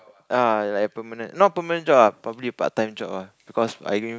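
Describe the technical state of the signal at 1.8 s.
At 1.8 s the signal is partway through an automatic gain rising that runs from 0.52 s to 4.14 s. The automatic gain control judged the input too quiet and is steadily raising its gain, by about 10 dB overall, so speech and background noise swell together. On the waveform the envelope widens gradually across that span. On a spectrogram every band, up to the call processing's 8 kHz ceiling, brightens evenly over time.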